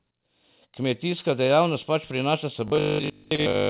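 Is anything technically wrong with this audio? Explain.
Yes. From 2.68 s to the end at 3.69 s, the speech has robotic sound from repeated short buffers. The likely cause is audio arriving too seldom, so the software kept replaying its last fragment, most of it repeats, while fresh sound was skipped. The repeats impose a fixed 50 Hz buzz, which fits a 20 ms buffer, giving a rigid, metallic tone that only loosely tracks the speech.

Within that stretch are two short stalls from a late packet, at 3.24 s and 3.36 s. Each time the jitter buffer ran dry, and the receiver stretched the last sound by about 16 ms and then 27 ms before resuming where it left off. Nothing is lost, but the sound briefly hangs with a slight buzz or dip. The stalls sit on top of the narrowband G.711 call path, where nothing is heard above 4 kHz.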